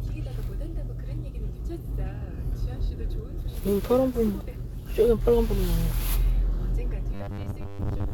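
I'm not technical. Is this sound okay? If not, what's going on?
No. From about 7.14 s to the end at 8.13 s there's robotic sound from repeated short buffers. The likely cause is that fresh audio stopped arriving fast enough, so the playback kept replaying the same tiny slice, about 10 ms long, and skipped the real sound for most of that stretch. Those rapid repeats stamp a steady 100 Hz buzz onto everything, giving the last second a flat, metallic, mechanical tone.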